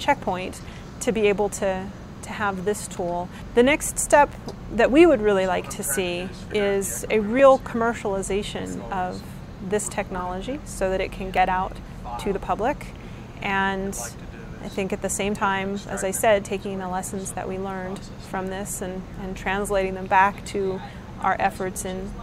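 A short click or tiny skip lands at 7.39, 11.37, 15.35 and 19.36 s, spaced almost exactly 4 s apart. That regular spacing matches the segment length and points to an overlap between stream segments. Each pair of segments claimed the same few milliseconds, and the player trimmed material that was never actually duplicated, so the waveform jumps forward. Unlike a dropout, no silent gap or muting is heard, only an abrupt discontinuity at each segment boundary.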